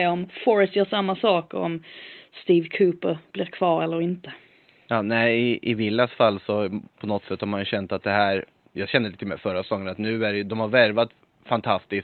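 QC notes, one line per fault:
No technical faults detected.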